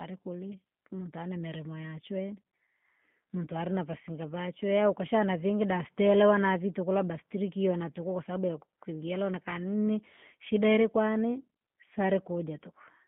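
Speech coded with G.729 throughout, which fits an 8 kbit/s link: the band stops near 3.5 kHz, and pulse-based rebuilding leaves it audibly rough and synthetic.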